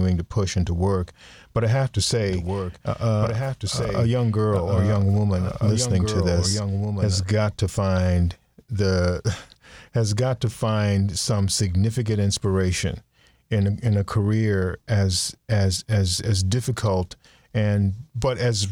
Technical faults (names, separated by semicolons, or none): doubled audio track